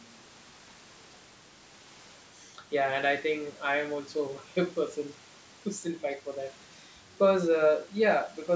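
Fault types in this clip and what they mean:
No faults are present in this speech recording.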